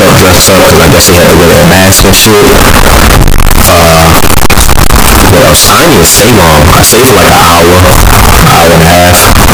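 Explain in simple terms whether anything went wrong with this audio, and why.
Signed and unsigned mixed up, for the whole clip from start to finish, is what went wrong. The speech is buried under a loud, harsh buzz, and even the pauses roar as loudly as the talking. Each stored number has a marker for whether it is positive or negative, and that marker was most likely misread, which fits 16-bit samples. Every time the wave crosses zero, it leaps from one extreme to the other.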